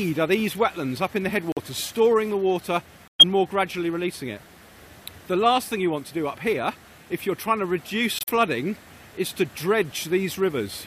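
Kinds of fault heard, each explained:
Corrupt frame muted: The sound cuts abruptly to silence at 1.52–1.58 s, 3.07–3.24 s and 8.19–8.30 s, then resumes on time. Damaged compressed frames were rejected by the decoder and replaced with silence, so each gap spans two or more whole frame lengths.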